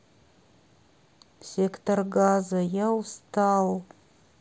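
At 1.71 s and 3.81 s, concealed Bluetooth headset packet loss replaces 7.5 ms of speech, which fits one lost packet, with a repeated matching stretch of recent waveform. Each is nearly inaudible. The waveform shows a seamless repeated cycle, and the spectrogram shows a faint harmonic smear below mSBC's 8 kHz ceiling.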